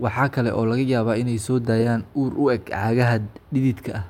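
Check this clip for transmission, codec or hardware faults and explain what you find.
Nothing in this speech recording points to a fault. There is nothing to report.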